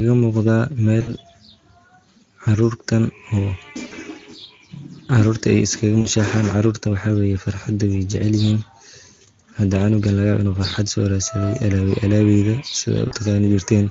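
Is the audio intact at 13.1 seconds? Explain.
No. Between 13.07 and 13.15 s the stream suffers VoIP packet loss concealed by the speech codec. About 40 ms of audio went missing, which fits two 20 ms frames. The decoder filled the gap by extending its last pitch period and spectral filter while stepping the gain down. The speech there is replaced by a stretched, buzzy tone or coloured noise that fades, and it stays weak or distorted for tens of milliseconds or more after real packets resume, because each frame builds on the last.

That moment also carries the Speex codec damage present across the whole clip. The encoder is running at 16.8 kbps, so the excitation signal gets too few bits to describe the voice accurately. The speech sounds plainly noisy and hoarse, with an edge of roughness. Any content above 8 kHz is a shaped, noise-like fill rather than real detail.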